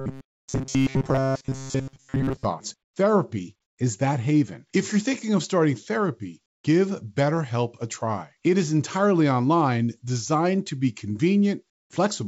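From the very start until 2.45 s, the speech has a rigid, metallic buzz locked at about 134 Hz. The syllables are still roughly traceable, but most of the sound is made of repeats rather than fresh audio. This is robotic sound from repeated short buffers. New audio likely arrived too seldom, so the receiver kept looping the last fragment, about 7.5 ms long, which fixes the pitch at one over that length.

Three short gaps follow where the background turns into smooth, featureless hiss. From 2.84 to 2.96 s (120 ms) it drops by about 12 dB, and from 6.46 to 6.64 s (180 ms) and 11.70 to 11.90 s (200 ms) by about 22 dB. The real background sits about 56 to 61 dB below the loudest speech. This is comfort noise in place of the background, likely because the sender's voice detector paused transmission and the receiver synthesised noise to fill the silence. The call path itself carries nothing above 8 kHz, consistent with G.722 at 64 kbps.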